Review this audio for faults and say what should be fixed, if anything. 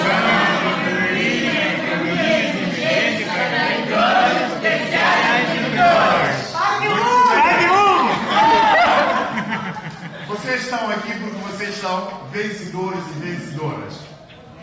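Nothing stood out on listening, so there is nothing here that needs fixing.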